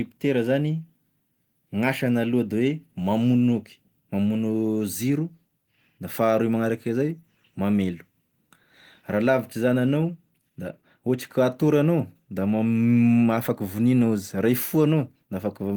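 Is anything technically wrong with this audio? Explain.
No, nothing technically wrong.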